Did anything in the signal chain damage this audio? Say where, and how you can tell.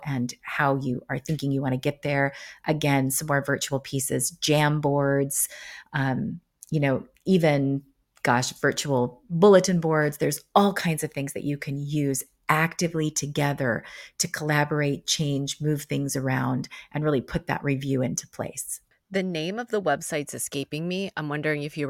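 No, nothing in the signal chain damaged this speech.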